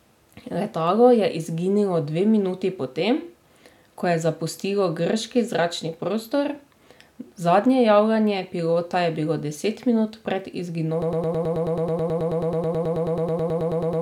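Speech clip that hits a broken-record loop at 11.02 s: a 108 ms fragment repeats back to back until the end, likely a stalled player or stream.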